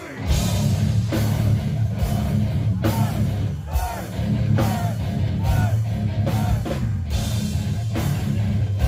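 No technical faults are audible.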